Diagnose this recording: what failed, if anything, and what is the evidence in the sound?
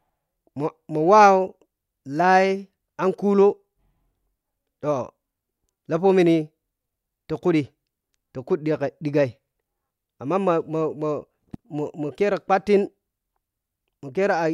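Nothing failed here: the speech runs along without a single dropout, glitch or distortion to point at anywhere in the recording.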